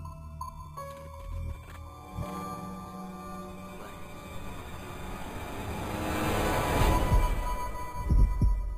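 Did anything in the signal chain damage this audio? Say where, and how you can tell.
Yes: imaging from sample-and-hold upsampling at the rate converter, throughout. Images near 5.5 to 11 kHz, about 21 dB down, fit 11 kHz repeated to 44.1 kHz, adding a bright metallic fizz.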